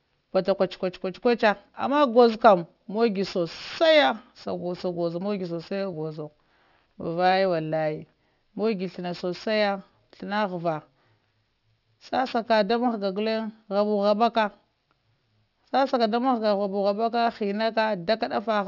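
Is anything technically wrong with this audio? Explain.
Yes. Aliasing runs through the whole speech clip. The audio was brought down to a lower sample rate without first removing content above the new limit, which fits a drop to a 12 kHz rate with a fold point at 6 kHz. Energy that belonged above 6 kHz mirrors back below it as unrelated tones, roughly 25 dB under the speech, so sibilants sound gritty and metallic. Plain band-limiting would only dull the top end. Here false high content crowds right up against 6 kHz.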